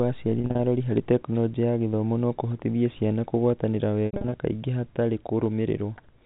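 Brief buzzy, held stutters interrupt the speech from 0.39 to 0.59 s, just before "arori harĩ", and from 4.06 to 4.34 s, between "no kũhotithia ciana kũgũatanĩra" and "kaingĩ hatarĩ". This is packet loss with pitch repetition: scattered gaps, longest 40 ms and 70 ms, were each filled by repeating the last pitch period.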